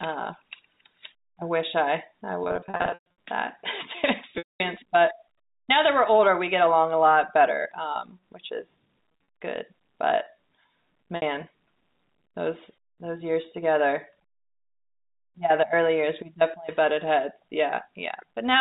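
Packet loss with pitch repetition breaks the speech four times. From 2.44 to 3.04 s about 480 ms goes missing in scattered gaps, the longest 120 ms. At 4.38 to 4.60 s a single 220 ms gap falls to silence. At 9.12 to 9.28 s the losses are short, about 100 ms in total with none over 40 ms, and the last, at 11.16 to 11.22 s, lasts 60 ms. The gap lengths fit 20 ms packets. The receiver fills each gap by repeating the last pitch period, so brief losses sound like a held, buzzy tone, while longer ones fade out over about 50 ms into silence before the speech cross-fades back. Over the G.711 telephone coding, nothing above 4 kHz passes throughout.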